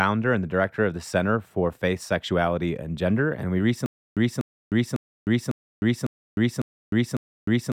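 From 3.86 s to the end, a stutter with silent gaps: a 244 ms burst repeats seven times every 551 ms, separated by 307 ms of digital silence, likely from a stalled stream.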